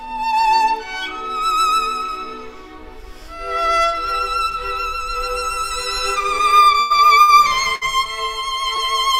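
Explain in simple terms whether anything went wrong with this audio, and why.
Yes, three things went wrong, all in how the audio was carried across the network in small packets.

From 6.54 to 7.50 s there is repeated packet loss, the kind that gives a robotic sound. Packets kept going missing or arriving late, five times in under a second. Each time, the receiver covered the hole by repeating the last bit of sound. About a quarter of that stretch is patched over like this, the longest hole lasting 100 ms, so the sound turns choppy, with small pieces gone.

At 7.75 to 7.84 s there is a burst of packet loss: a short run of packets never arrived in time. The receiver stretched the last sound for about 60 ms, letting it fade as a held buzz or hiss, then jumped ahead. Another 60 ms of the original audio is simply skipped, so the sound seems to lurch forward.

Between 8.76 and 8.96 s there is a short stall from a late packet. 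One packet was delayed and the waiting buffer ran dry, so the receiver held the last sound for about 17 ms until it showed up, then carried on from the same place. Nothing is lost, but you may hear a tiny drawn-out moment or slight buzz.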